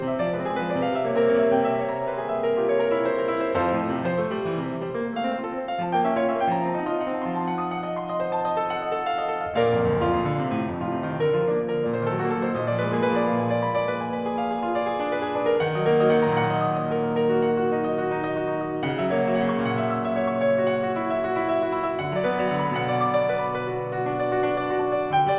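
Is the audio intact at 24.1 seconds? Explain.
Yes, the music at 24.1 seconds plays through intact, with no dropout, click, distortion or other fault at that moment.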